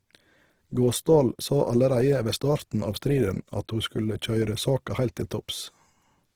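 Throughout, the speech sounds grainy and rough, the likely result of Opus compression in CELT mode at a rate fitting 16 kbps, with energy-filled bands still reaching 20.4 kHz.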